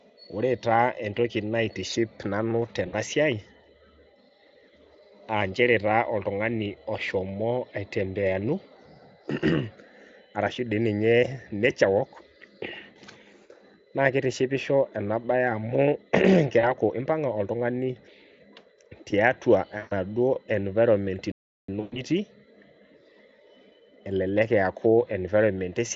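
Just after "naitiship nanu", at 2.87 s, the sound smears into a brief buzzy, fading tone. This is VoIP packet loss concealed by the speech codec: about 60 ms of audio went missing, and the decoder stretched its last pitch and filter state while lowering the gain. The same smear recurs at 16.59 s (40 ms, just before "impanga oltungani") and at 19.77 s (140 ms).

At 21.32 s the audio drops to silence for about 367 ms, then resumes. This is a playback stall, likely from the player running out of data.

At 21.80 s, 140 ms of loss scattered over 160 ms, with a longest run of 120 ms, leaves the Speex-coded sound buzzy and weakened before it recovers.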